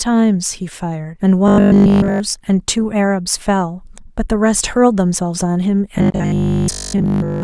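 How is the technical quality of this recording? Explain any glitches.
The recording has two robotic stretches. Robotic sound from repeated short buffers appears at 1.48 to 2.2 s, throughout, and at 5.98 to 7.42 s, for most of it. A 20 ms chunk is likely replayed while audio arrives late, imposing a rigid 50 Hz metallic buzz on the speech.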